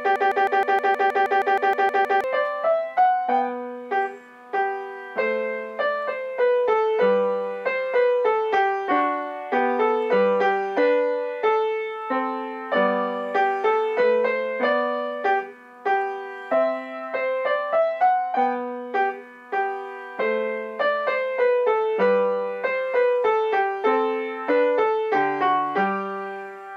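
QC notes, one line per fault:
0.00–2.24 s, broken-record loop: the clip opens already inside a stuck repeat, with a fragment of about 0.16 s (158 ms) replaying back to back, identical each pass, 13 times before normal playback resumes at 2.24 s. The exact, gapless recurrence at a fixed period gives the stuttering, mechanical rhythm. The likely cause is a stalled player, encoder or stream re-sending the last fragment it held, so the audio belonging to those two seconds is missing.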